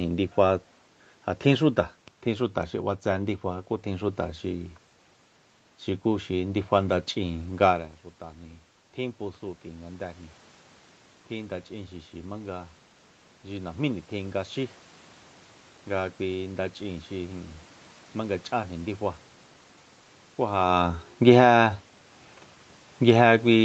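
A speech recording made through a call microphone path, with audio reaching up to 8 kHz and room noise audible throughout, showing two stretches of automatic gain control. Automatic gain rising runs from 8.2 s to 18.89 s. Around 7.5 s the talker moves away from the microphone and the input drops by about 14 dB. The gain control responds slowly, adding about 9 dB over roughly ten seconds, so the voice climbs back and the room noise swells with it. The voice never quite returns to its earlier level. Automatic gain falling begins at 20.62 s and lasts to the end of the clip. Around 20.5 s the talker's level changes again and the input comes in too loud for the gain that has built up. The voice starts hot and then sinks steadily together with its background as the control pulls the gain back down.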